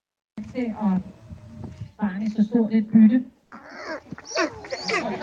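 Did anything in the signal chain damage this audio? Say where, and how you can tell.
Yes, at the codec: from 3.43 to 3.51 s the background becomes steady, featureless comfort noise, about 1 dB quieter, likely discontinuous transmission filling an 80 ms pause.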